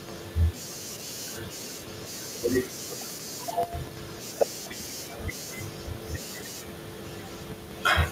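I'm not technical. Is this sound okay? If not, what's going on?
No, there's an echo leak: a faint copy of the speech returns about 0.8 seconds late, at 0–0.28, 1.56–2.35, 3.48–4.35 and 5.5–6.49 s, likely from a loudspeaker's echo slipping back into the call.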